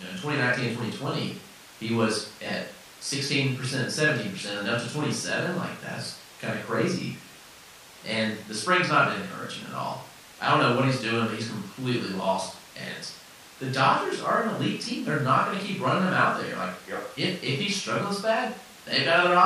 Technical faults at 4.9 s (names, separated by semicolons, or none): none